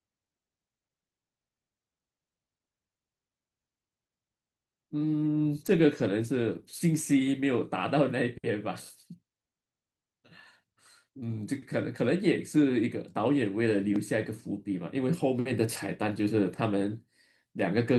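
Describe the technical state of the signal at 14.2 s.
At 14.2 s the speech signal is intact, with no dropout, clipping, distortion or other technical fault audible at that point.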